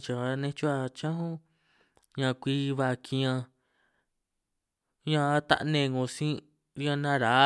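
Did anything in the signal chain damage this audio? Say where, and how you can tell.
No, nothing in the signal chain damaged this audio.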